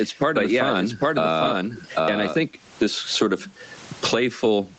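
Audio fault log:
throughout – gain pumping: Loud and quiet passages sit unnaturally close together, giving a squashed, crowded feel. The swing is roughly 25 dB. The likely cause is microphone gain set far too high, with a fast limiter or compressor clamping down on each loud moment and releasing in the gaps.
0.00–2.36 s – doubled audio track: A second, full-band copy of the same sound runs behind the original, trailing by about 0.7 s and only about 5 dB quieter, so phrases are heard twice. The copy is already present when the clip opens and cuts off abruptly at 2.36 s, just after "but yeah", with no reverb tail or room colour. That dry, fixed lag likely comes from the audio being captured a second time through a slower path.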